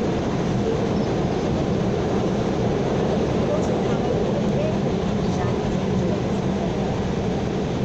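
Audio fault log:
No faults are audible anywhere in this recording.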